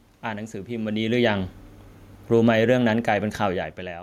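A speech clip with automatic gain falling from 2.18 to 3.73 s: the gain control, reacting to loud input or strong background noise, eases the level down by about 4 dB, so the waveform envelope and background noise floor sink together. The level shifts around 1 s and 3.5 s come from the talker moving relative to the microphone.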